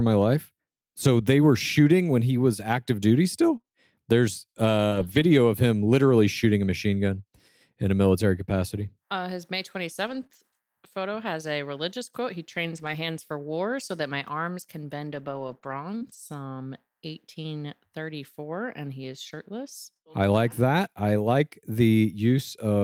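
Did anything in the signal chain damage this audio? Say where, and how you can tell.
Yes. Brief ticks and smeared hiccups break into the speech at 3.57–5.25 s and 10.07–16.15 s, a few in each stretch. These are scattered short gaps from the network: lost packets, 80 ms per stretch, holes up to roughly 40 ms, patched by continuing the preceding sound.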